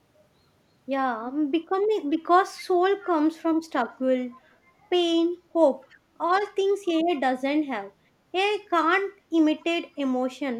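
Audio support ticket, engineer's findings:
Faint delayed repeat of the speech, about 267 ms late, in brief scraps at 3.05–3.1 s, 5.9–5.96 s, 9.6–9.65 s, quieter each time. Echo leak: far-end loudspeaker pickup likely slipping past the echo canceller.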